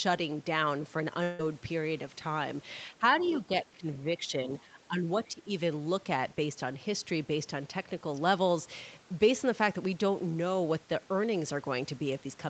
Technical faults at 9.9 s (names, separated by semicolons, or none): none